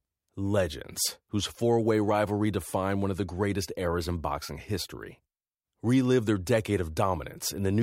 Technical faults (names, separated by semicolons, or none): none